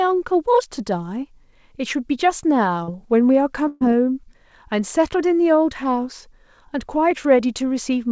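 At 2.84 to 2.89 s there is a short concealed packet loss. About 40 ms of the call arrived too late to decode, and the receiver bridged roughly 35 ms by extending the preceding sound before crossfading back. It is heard as a brief smear. On a spectrogram, the sound flattens into a short, overly regular stretch.

From 3.67 to 3.83 s comes a burst of packet loss. About 140 ms went missing in a row, and concealment filled about 132 ms of it, so there is no silent gap. The last sound is held and fades, then the speech resumes further along. The spectrogram shows smeared bands that dim until real content returns.

At 7.11 s a single sharp click is heard. This is dropped samples, likely a loss of a tiny fraction of a millisecond. The waveform steps abruptly from one value to a later one, and the spectrogram shows one thin vertical line that reaches up to the 8 kHz ceiling of the call codec.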